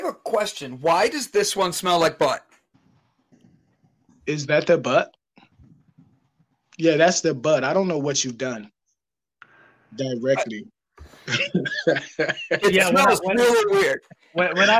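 No faults can be heard anywhere in the clip.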